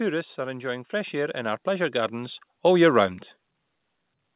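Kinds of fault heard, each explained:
Automatic gain rising: From about 0.36 s to 3.11 s the level climbs steadily by about 11 dB as the gain control, judging the input too quiet, keeps turning it up. Speech and background noise swell together, unlike a talker moving closer, where the noise floor stays put. The slow, seconds-long climb also sets it apart from a compressor's quick pumping. The call band, with nothing above 4 kHz, stays unchanged throughout.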